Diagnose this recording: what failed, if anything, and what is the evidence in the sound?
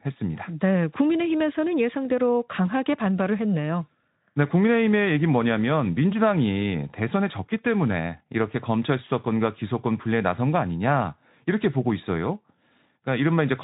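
Nothing in the recording points to a failure at any stage: the speech passes through a Speex codec that is working as intended, with its narrowband limit audible as an absence of content above about 3.9 kHz and only light coding texture on the voice.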